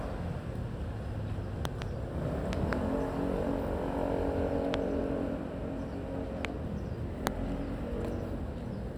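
Everyday sounds carry loud pops at 1.65–1.84 s and 2.53–2.75 s as double pops, then singly at 4.74–4.76, 6.45–6.47 and 7.27–7.29 s. They peak about 20 to 25 dB above the sound. Each is likely a voltage pulse from a switch, plug or static.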